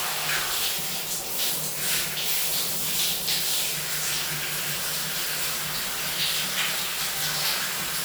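No technical faults can be heard anywhere in this recording.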